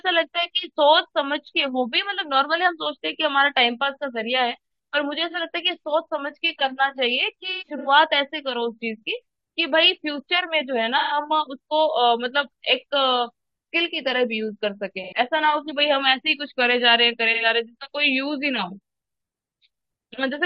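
AAC frame loss with concealment hits at 5.30, 7.52–7.88, 10.97–11.17, 15.03–15.13 and 17.33–17.45 s. The decoder patches gaps from the last good spectrum, giving short smeared, phasey blurs. Around 7.5 s it's choppier, with scattered dropouts up to about a tenth of a second.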